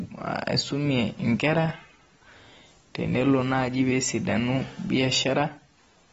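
AAC compression damage runs throughout the speech, with nothing above 7.6 kHz. The cause is likely an AAC-LC encoder starved of bits, which fits roughly 24 kbps: it drops the top band and coarsely quantises the rest, leaving sibilants smeared and fizzy and sustained sounds warbling.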